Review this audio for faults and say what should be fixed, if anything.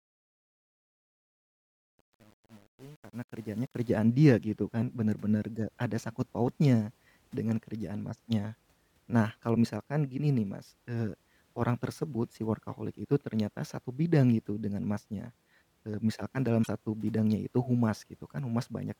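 Truncation distortion on a fade runs from 0.00 to 3.91 s, worst up to about 3.82 s. The stage producing the fade keeps too few bits and adds no dither, which fits an 8-bit path. Near silence the waveform collapses into a handful of coarse steps, so the opening sounds gritty before the speech settles. To prevent this, apply fades at full resolution and dither whenever reducing word length.

Damaged data in a compressed stream shows up from 16.60 to 16.68 s, a brief 80 ms blip. Corrupted or missing bytes in the encoded file make the decoder misread the affected frames, lose sync and hunt for the next valid frame header, producing a short glitch in the speech. To prevent this, verify file integrity with checksums after transfer and re-encode from the original source.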